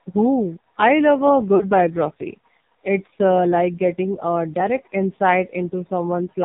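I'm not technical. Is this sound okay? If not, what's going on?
No. The whole clip has the sound of the AMR narrowband mobile codec, the old phone-call format. Everything above 4 kHz is gone, so the voice sounds muffled and thin. It is squeezed very hard, which makes it buzzy and robotic.

At about 1.56 to 1.66 seconds there are lost AMR speech frames. A short piece of the signal arrived garbled and was thrown away, and the phone guessed to fill the gap. You hear a brief warble or dip, then the voice returns rough for a moment.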